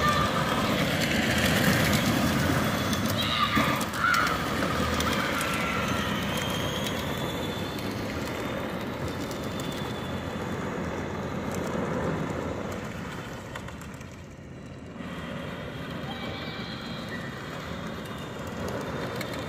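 A doubled audio track runs throughout the clip: every sound is followed by a second, full-band copy roughly 150 ms later and about 5 dB quieter. The lag stays fixed, and the copy carries no decay or room colour, so it reads as a distinct slapback rather than reverberation, smearing every onset into a stuttered double attack. The likely cause is the same signal reaching the mix twice, once directly and once through a slower path.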